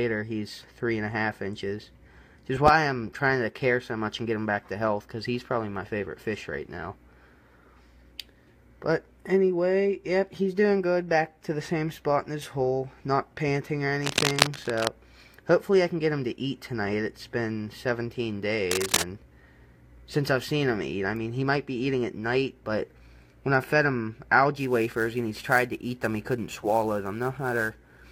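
A worn cable or connector being moved is the likely cause of cable scratch noise at 14.02 to 14.89 s and 18.71 to 19.02 s, adding rough, uneven rustling bursts roughly as loud as the sound itself. From 24.55 s to the end, an unstable converter clock causes sample clock jitter of around 10 microseconds, producing a hiss-like roughness about 25 dB below the signal that grows on loud, bright passages.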